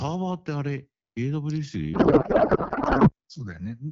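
From 1.93 to 3.13 s the speech dissolves into garbled warble. This is a codec payload misread: octet-aligned AMR frames are decoded as bandwidth-efficient, so every field is misplaced.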